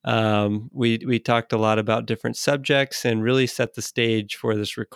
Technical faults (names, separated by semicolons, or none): CD scratch ticks